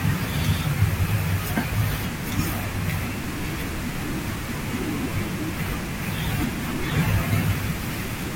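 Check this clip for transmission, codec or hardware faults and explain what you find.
No transmission, codec or hardware faults can be heard in this speech recording. A steady room noise sits about 14 dB below the speech; it belongs to the acoustic space at the microphone rather than to the system.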